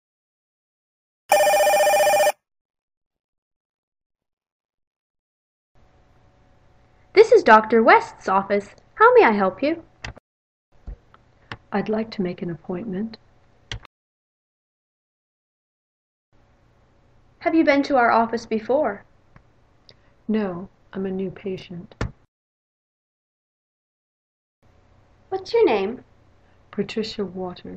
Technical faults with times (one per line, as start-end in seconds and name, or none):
10.72-10.76 chunks out of order
21.58-21.62 chunks out of order